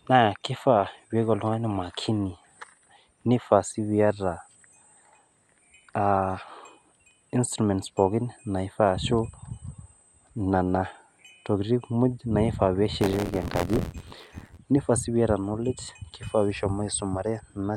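From 13.00 to 14.58 s, the writing side of the audio ring buffer slips against the reading side, causing buffer tearing. About 15 percent of each period replays sound from roughly 20 ms earlier, and the hard joins make an 86.1 Hz robotic buzz that fits a 512-sample buffer.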